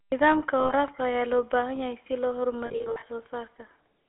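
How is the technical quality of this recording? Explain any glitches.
Technical quality is limited: the whole recording carries clear codec coloration, and two short dropouts interrupt the speech.

GSM full-rate codec, throughout: band-limited to roughly 300 Hz–3.5 kHz, with a buzzy, gravelly roughness from pulse-excited vocal-tract modelling. This is consistent with 13 kbps GSM full rate.

Lost GSM frames, 0.60–0.73 s and 2.66–3.03 s: missing frames were filled by repeating the last good frame, producing a rough metallic ring. The first gap is about 100 ms, just before "ayaa loo baahan yahay". The second, after "baahan yahay si loo", totals about 220 ms scattered across 360 ms, with the longest run under a tenth of a second.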